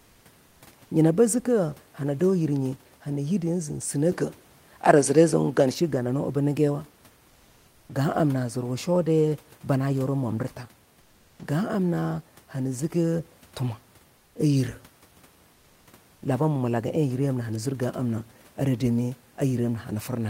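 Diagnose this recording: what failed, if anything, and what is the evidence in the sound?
At 4.12 s the capture stage switched input, most likely to a poorer microphone or a headset's call profile, and stayed there until 5.74 s. There is no gap at the change. The sound simply turns duller, with nothing above 11.7 kHz, shifts in level by roughly 5 dB, and carries a different noise floor sitting roughly 45 dB under the signal. The different band limit, tone and noise mark a separate device in the driver path.

Comfort noise in place of the background appears three times, from the call codec's discontinuous transmission, which fits Opus DTX: 7.27 to 7.89 s (620 ms, about 2 dB quieter), 11.01 to 11.39 s (380 ms, about 5 dB quieter) and 14.17 to 14.35 s (180 ms, about 4 dB quieter). In each gap the real room noise, about 33 dB under the speech, gives way to a flat, featureless hiss near 37 dB below the loud passages. 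The sender's voice detector likely stopped transmitting and the receiver synthesised the fill.

Onset clipped by the voice detector at 11.37 s: the sender was likely slow to resume, so the first 20 ms of the returning sound never arrived and comfort noise covered it. The speech starts abruptly, without its soft rise, right where the second comfort-noise gap ends. The clipping happens in call processing, in the same DTX gating.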